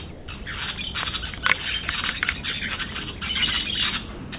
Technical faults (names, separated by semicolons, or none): sound dropped by the voice detector